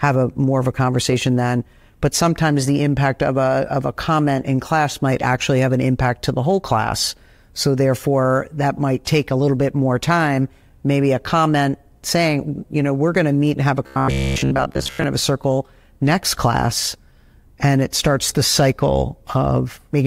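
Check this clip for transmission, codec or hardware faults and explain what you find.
One fault is present. From 13.87 to 15.04 s, between "have a" and "to have a circle", there is robotic sound from repeated short buffers. The likely cause is late audio being covered by looping roughly 15 ms chunks. For most of that span the speech becomes a rigid, metallic buzz at about 66.8 Hz.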